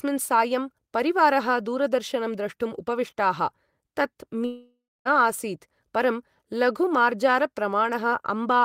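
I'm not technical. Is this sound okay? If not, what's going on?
No. From 4.45 to 5.08 s the speech breaks off in what is likely a long network dropout: the last sound smears into a fading buzz, then about a quarter second of silence, and the speech resumes with roughly 0.6 s of it simply gone.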